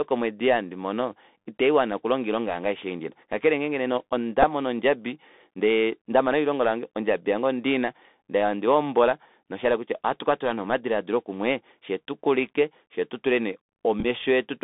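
The whole recording carries the sound of a Bluetooth CVSD headset codec. The speech sits in a telephone band, roughly 200 Hz to 3.7 kHz. The coder sends one bit per sample at 64 kHz, nudging the signal up or down with an adaptive step. That damage is plainly audible. Louder high-frequency parts outrun the step and distort. S sounds turn scratchy. A granular hiss lies under the speech.

From 4.43 to 4.45 s, just before "ondjabi ndee ndama elilongo", there is a Bluetooth headset packet repeated. About 7.5 ms of audio went missing, which fits two lost packets. The chip replayed the previous packet's bits in their place.

From 14.00 to 14.05 s, right after "tukulike fyee tutule nee", packet repeats return in a scattered burst. About 19 ms is lost across a 45 ms stretch, which points to around five packets. The longest unbroken run is about ten milliseconds. Over that span the repeats come every 3.75 ms, and a brief steady buzz near 267 Hz breaks through before clean audio resumes.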